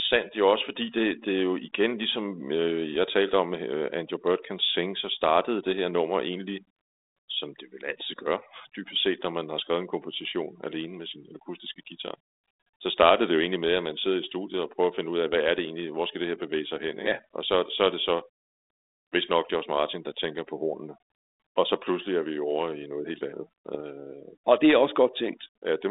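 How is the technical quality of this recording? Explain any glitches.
The recording has two problems: heavy-handed noise removal throughout, and two brief glitches from transmission errors. It travels over a narrow telephone line, roughly 250 Hz to 3.7 kHz, consistent with 32 kbit/s G.726 ADPCM with only light coding roughness.

Overdone noise removal runs throughout. A noise reduction stage set too aggressively pushes individual frequency bands down or out whenever they sit near its noise estimate, taking quiet parts of the voice with them. The background collapses to near silence with twinkling specks.

Bit errors on an ADPCM link strike twice. The first is at 9.10 to 9.14 s, between "vil altid gøre dybest" and "når man har skrevet". The second is at 23.74 to 23.80 s, just after "i noget helt andet", and is about twice as dense. Flipped bits corrupt the decoder's step size and prediction, so each error keeps ringing for milliseconds. 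The result is pops and rough bursts with brief level jumps.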